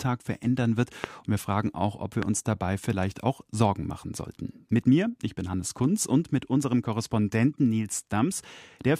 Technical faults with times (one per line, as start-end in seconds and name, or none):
1.04-1.06 loud pop
2.23-2.25 loud pop